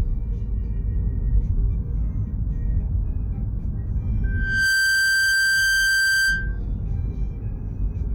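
Everyday sound, interrupted from 4.23 to 6.59 s by a loudspeaker feedback squeal: a steady 1.6 kHz tone swells over a fraction of a second to a few dB above the sound, as mic-to-speaker loop gain exceeds one. A spectrogram shows one bright horizontal line; the waveform envelope grows.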